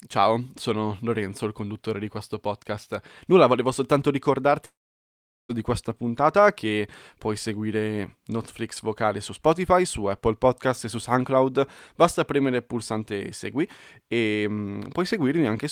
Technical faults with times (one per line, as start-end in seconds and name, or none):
4.65-5.51 long network dropout